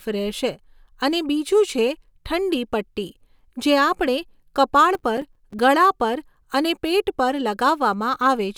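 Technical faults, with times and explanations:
4.95–5.59 s, processor overload crackle: the processor fell behind its deadlines for a run of roughly fifteen short buffers, each around 5 ms, and every missed buffer dropped out to silence, so hard-edged gaps chop the speech into a gritty crackle until the load eases.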